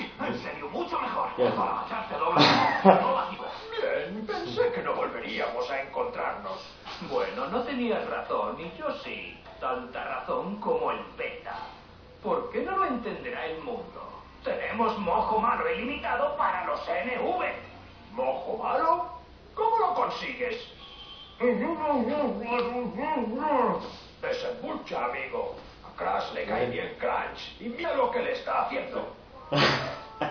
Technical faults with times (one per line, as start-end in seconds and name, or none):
3.33-3.40 compressed frames skipped